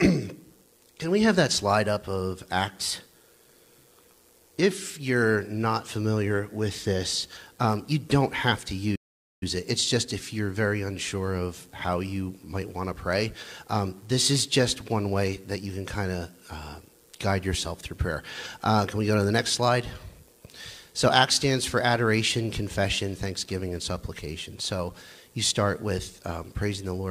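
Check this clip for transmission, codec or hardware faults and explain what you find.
One fault appears, a playback stall from 8.95 to 9.43 s. The player likely ran short of buffered data or had its output thread blocked, so nothing reached the output for 0.46 s. The sound cuts off mid-flow into silence, then resumes.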